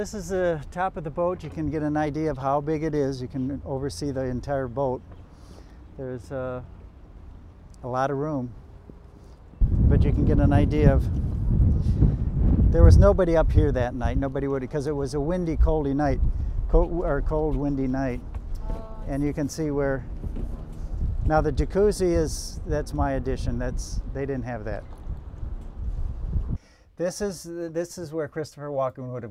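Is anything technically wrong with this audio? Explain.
No, nothing technically wrong can be heard here; the signal holds together without any audible technical fault.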